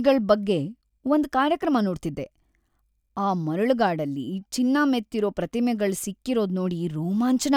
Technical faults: none

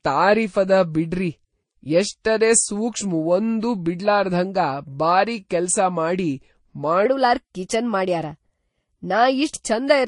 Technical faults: transcoding between lossy codecs; section at the wrong speed

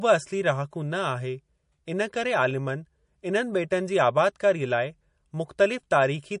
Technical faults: MP3 compression

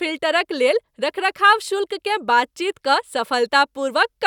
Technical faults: none

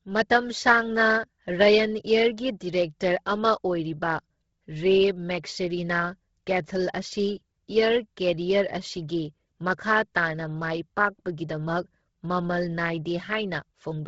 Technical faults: Bluetooth LC3 compression

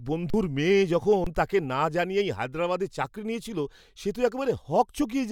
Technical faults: underrun with held sample

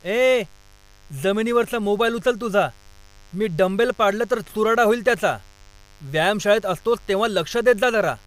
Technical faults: mains buzz

